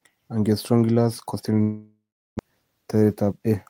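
A speech clip in which, from 1.61 s to 2.41 s, the sound freezes into a smeared buzz that fades away over a few tenths of a second, followed by about 0.37 s of silence before speech resumes with roughly 0.6 s of material simply gone. This is most likely a long network dropout: no packets arrived, so the receiver stretched out the last sound it had until that concealment ran dry. The delay afterwards shifts by something like 150 ms. Between 2.95 s and 3.47 s the speech briefly sounds hurried, running at about 108% speed while the pitch stays put. That is a jitter buffer speed-up. The receiver was holding more audio than it wanted and trimmed out short pitch-period-sized slices in quick succession, around 50 ms in all, to pull the delay back down.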